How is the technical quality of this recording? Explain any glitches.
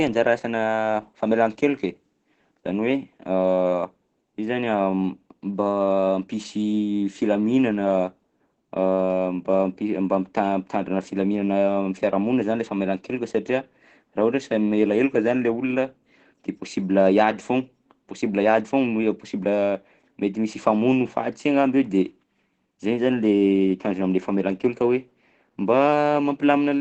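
The quality is poor. Throughout, the speech is likely squeezed by heavy Opus compression in its speech mode, at a rate that fits about 12 kbps. It sounds muffled and hoarse, with nothing above 8.5 kHz.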